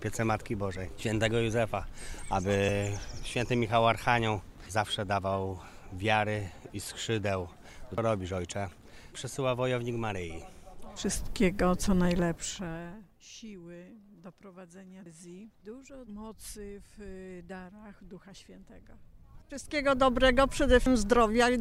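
At 2.69, 7.98, 15.06 and 20.86 s there are short blips from damaged data in a compressed stream. Corrupt bytes make the decoder misread frames and lose sync. Each gives a brief glitch while it hunts for the next header.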